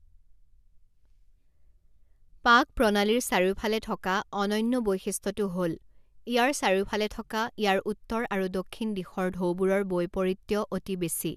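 No technical faults can be heard anywhere in the speech. Nothing in the recording calls for a time mark or a description of something going wrong.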